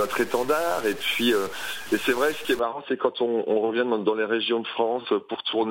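From the start to about 2.59 s there's a harsh, buzzy grit riding on everything, and even the quiet stretches fill with hiss. That's the sound of a stuck bit, likely one data line pinned, throwing values off by a step of about -35 dBFS.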